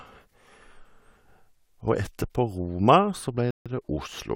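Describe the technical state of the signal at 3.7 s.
At 3.7 s the speech has just resumed after a rebuffering stall from 3.51 to 3.66 s. The player ran dry and went silent for 150 ms. It then picked up exactly where it stopped.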